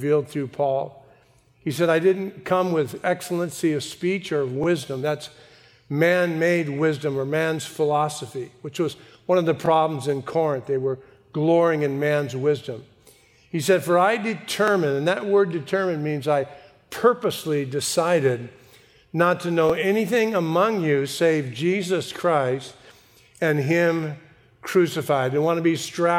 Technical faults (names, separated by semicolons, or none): overlapping chunks